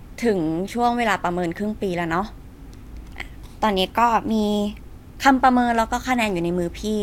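No technical faults are audible.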